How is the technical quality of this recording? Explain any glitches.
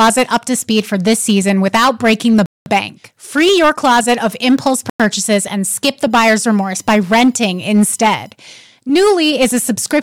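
The technical quality is poor: the speech is clipped throughout, it drops out twice, and a tonal whine sits under part of it.

Hard clipping runs through the whole clip. The signal is driven about 11 dB beyond what one stage can pass, so the peaks are sliced flat, with something like one sample in twenty cut off at that stage's limit. Those squared-off tops create harmonics well above the speech band, heard as a harsh, gritty fuzz on every louder syllable. In the waveform the peaks form flat plateaus. A spectrogram shows broadband splatter reaching into the upper kHz on each loud moment.

Two abrupt silences interrupt the speech: 0.2 s from 2.46 to 2.66 s, and 0.1 s from 4.90 to 5.00 s. The sound cuts out completely and then resumes, which points to a likely Bluetooth stall. Interference delays the radio packets, the receiver's buffer empties, and playback halts until retransmitted data arrives. 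On the waveform these appear as flat silent gaps. A spectrogram shows them as clean vertical blank strips across all frequencies.

From 6.10 to 8.31 s a faint USB whine appears. It is a fixed-pitch tone built on 1 kHz, and its strongest component is at 5 kHz. It sits far below the speech, about 45 dB down. The bus's 1 ms frame activity leaks into the audio through shared power or ground, producing a thin, steady whistle. A spectrogram reveals evenly spaced horizontal lines at 1 kHz multiples, brightest at 5 kHz. The whine is too small to see in the waveform.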